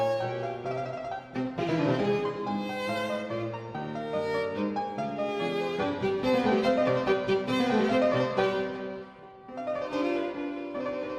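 Nothing goes wrong anywhere in the recording, so there's no technical fault to point to here.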